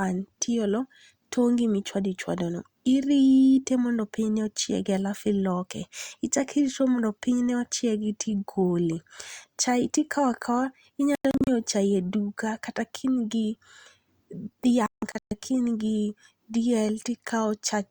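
The receiver suffers a digital broadcast dropout twice, losing frames and muting until clean frames return. From 11.15 to 11.48 s the speech breaks into short holes totalling 192 ms across 320 ms, the longest 96 ms, which fits about six lost frames. From 14.86 to 15.32 s a worse burst removes 320 ms across 448 ms, with one 160 ms gap. Each time the speech is chopped and what was sent in the gaps is gone.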